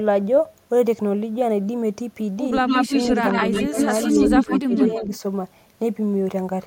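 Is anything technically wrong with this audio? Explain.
Yes. Two faults are audible, and both point to echo cancellation trouble on a call.

From 2.59 to 5.03 s there is an echo leak. A second copy of the speech trails the original by about 152 ms and is roughly as loud as the speech itself, so the two overlap into a doubled, smeared sound. This is likely residual loudspeaker pickup at the far end that the echo canceller failed to remove, sent back down the line.

Overlapping that stretch, speech is suppressed in double talk three times. At 3.68 to 3.76 s the level dips by about 20 dB for well under a tenth of a second. From 4.13 to 4.73 s there is a deeper drop of about 25 dB, affecting around 300 ms in total. At 4.91 to 5.12 s a shallower dip of about 10 dB lasts roughly 200 ms. With both sides active, the canceller likely could not tell the talker from the echo and attenuated everything, which makes the speech dip.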